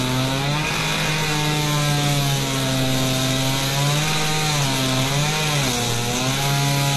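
An everyday sound recording with HE-AAC compression damage throughout. Treble is rebuilt, not original, sounding gritty and metallic. Nothing reaches above 12.3 kHz. This likely points to a very low bitrate, around 16 kbps.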